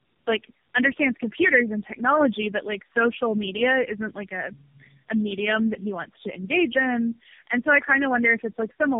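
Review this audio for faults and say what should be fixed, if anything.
Tandem speech coding runs throughout: the call was decoded and re-encoded at each link border, and the sound points to four speech codecs in a row, ending in low-rate AMR-NB. Each stage degrades the last one's output, leaving the speech rough, muffled and warbly, with nothing above 3.6 kHz. To prevent it, negotiate a single codec end to end or use transcoder-free operation so the speech is coded only once.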